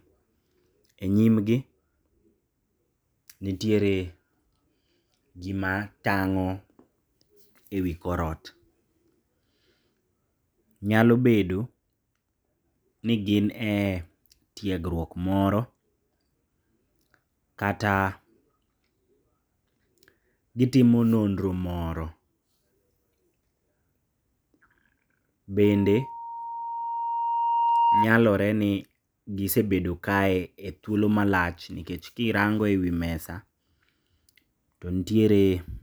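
Speech recording with loudspeaker feedback squeal from 25.64 to 28.09 s. A 934 Hz tone swells over about two seconds to roughly 5 dB above the speech. The microphone is re-amplifying its own loudspeaker.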